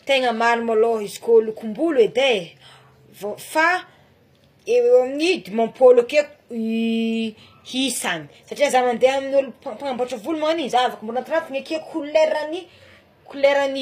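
Throughout the speech there is plainly audible HE-AAC compression, likely at a rate near 24 kbps. The treble is rebuilt from copied lower bands. Its harmonics no longer match the true ones. S sounds turn gritty and metallic. Nothing sounds above 15.5 kHz.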